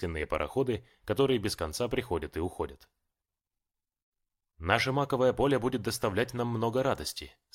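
No technical faults can be heard anywhere in the clip. Nothing in the audio points to a fault in capture, transmission or playback.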